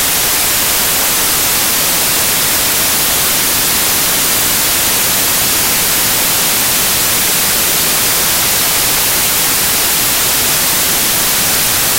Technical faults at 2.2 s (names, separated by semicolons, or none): samples built from the wrong bytes